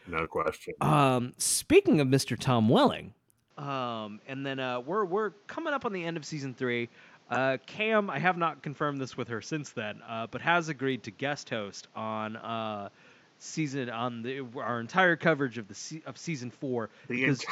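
At 3.50 s the speech turns duller and drops by about 10 dB, with no gap. Nothing above 7.6 kHz remains. A new noise floor sits about 30 dB down. The input was likely switched to a poorer device, which persists to the end.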